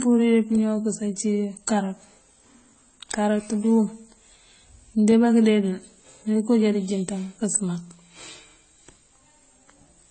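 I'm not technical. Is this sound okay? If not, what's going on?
No. From start to finish the speech sounds dull and smeary, with nothing above about 8.3 kHz; this is likely transcoding between lossy codecs, compressed twice, with artefacts stacking.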